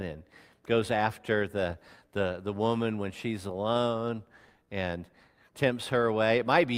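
Clock drift between sender and receiver runs through the whole clip: the sender's clock is about 2% slow, so the receiver's buffer keeps draining. Repeated timing corrections from 0.16 s to 6.40 s stretch the sound to 98% speed, adding about a tenth of a second as faint, unevenly spaced hiccups.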